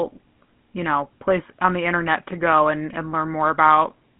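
From start to finish the speech carries the plainly audible buzzy, gravelly roughness of the GSM full-rate codec, which fits a 13 kbps coder that rebuilds the voice from a vocal-tract model fed by sparse pulses. Unlike simple telephone band-limiting (about 150 Hz to 3.4 kHz, nothing above 3.8 kHz), it adds that grainy rasp.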